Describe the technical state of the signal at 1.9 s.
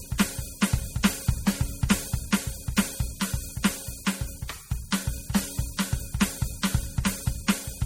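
At 1.9 s the music carries MP3 compression damage that runs through the whole clip. It is likely from a heavily squeezed encode, and the plainly audible smearing fits a bitrate around 48 kbps. Starved of bits, the encoder drops weak frequency lines that flicker on and off between frames, giving a watery, swirling texture and blurred attacks, with nothing above 19.1 kHz. A simple low-pass filter would only dull the top; it would not produce this shifting churn.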